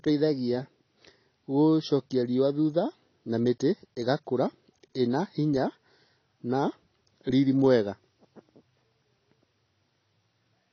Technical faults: AAC compression

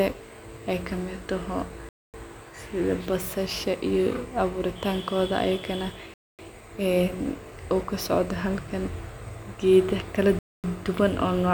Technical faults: gap between chunks

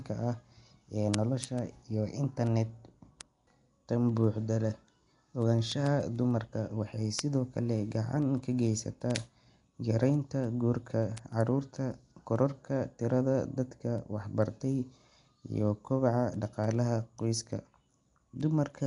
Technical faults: Nellymoser compression; word clock ticks

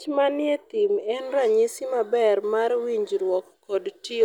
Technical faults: none

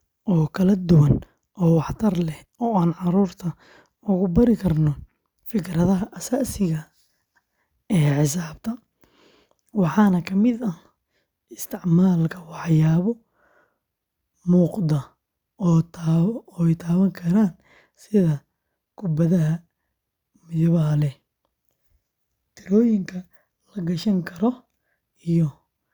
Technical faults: none

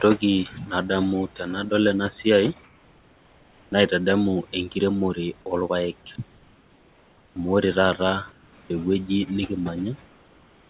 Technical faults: comfort noise in place of the background; sound dropped by the voice detector; onset clipped by the voice detector

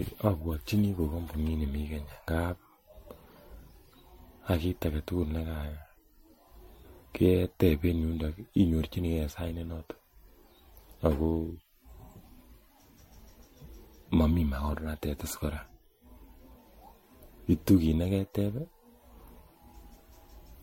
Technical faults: generation loss

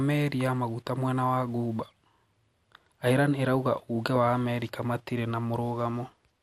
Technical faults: MP2 compression

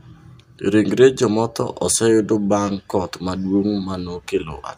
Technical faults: none

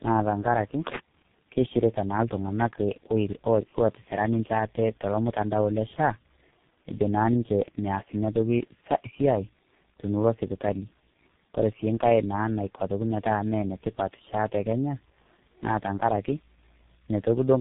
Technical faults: tandem speech coding

